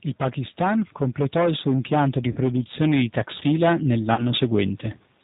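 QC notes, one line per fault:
Throughout: G.729 codec, plainly audible; speech rebuilt from filter, pitch predictor and sparse pulses at 8 kbit/s, nothing above 4 kHz, so it sounds rough and synthetic.
0.34–4.84 s: automatic gain rising; level and background swell together by about 8 dB over several seconds as the gain control slowly lifts a quiet input.
2.32 s and 4.14 s: VoIP packet loss concealed by the speech codec; about 40 ms missing each time, which points to two lost packets, so the decoder stretches the last frame into a fading buzzy tone or coloured noise and leaves the speech weak briefly afterwards.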